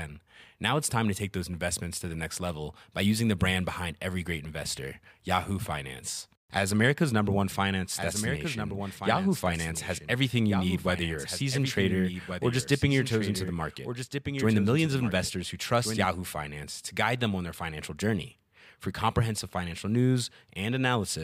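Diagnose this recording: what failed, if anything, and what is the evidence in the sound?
A slower second capture path likely mixed the speech in again. After "number one", from 7.95 to 16.05 s, a doubled audio track trails about 1.5 s behind, roughly 10 dB quieter.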